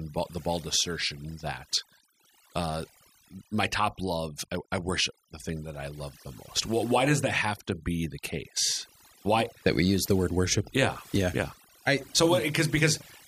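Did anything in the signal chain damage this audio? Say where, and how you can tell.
Yes. Throughout the clip the background drops to near silence with twinkling specks. That is overdone noise removal in the processing stage: the suppressor pulls individual frequency bands down whenever they approach its noise estimate, taking quiet speech detail with them.

A steady, raspy buzz enters at 0.37 s and continues to the end, roughly 35 dB below the speech. This mains buzz comes from the analogue wiring: switching spikes on the 60 Hz supply, twice per cycle, spread harmonics well up into the kHz range.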